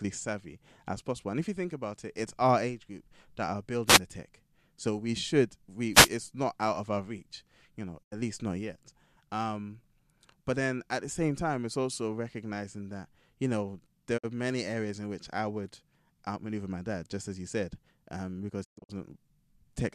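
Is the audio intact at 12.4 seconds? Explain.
No. At 12.43 s, between "same time it's also" and "that you know", there is a single sharp click. These are likely dropped samples. A fraction of a millisecond of the waveform is missing, so it jumps abruptly to a later value.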